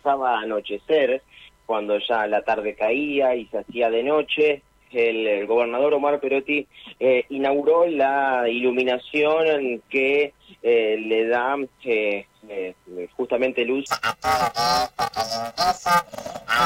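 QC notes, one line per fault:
13.86–16.65 s, planar audio read as interleaved: the sound turns into a robotic buzz at about 345 Hz through to the end of the clip, with no clear octave shift. Each block of left samples followed by right samples is being read as alternating left-right pairs, so every block plays twice at double speed, left then right. The blocks are only about 2.9 ms long, which fits a 128-sample block, so the switching rate comes through as a buzz rather than an octave jump.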